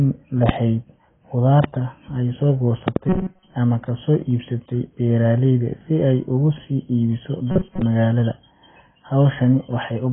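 Throughout the speech, heavy lossy coding, likely AAC compression at a very low rate (the damage fits something near 16 kbps), strips everything above 3.6 kHz and quantises the rest coarsely, leaving the voice dull and smeared, with a warbling, fizzy edge on sibilants.

A loud pop, likely a voltage spike from a switch, plug or driver glitch, lands on the audio at 0.49 to 0.51 s, peaking around 20 dB above the speech. A second, about 15 dB up, comes at 1.64 to 1.66 s, just before "ay soo". Just after "ay soo", a double pop at 2.88 to 2.98 s hits about 20 dB up, with the speech continuing underneath each one.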